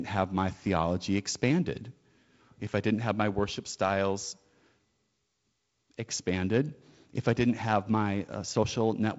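Nothing technically wrong turns up in this speech clip: it's simply carried over G.722 wideband telephone coding at 48 kbit/s, with the top of the sound ending around 7.7 kHz as that coding would have it.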